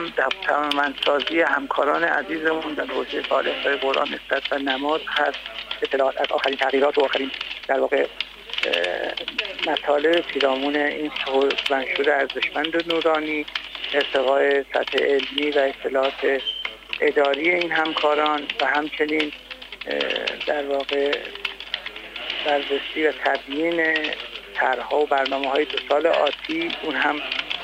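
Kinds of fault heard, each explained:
Time-stretched section: from 5.82 to 7.98 s the pace jumps to about 1.69 times normal while the pitch holds steady, so this stretch sounds rushed against the surrounding audio. The likely cause is software compressing that segment to fit a shorter duration, preserving pitch by discarding short slices of the waveform rather than simply playing faster.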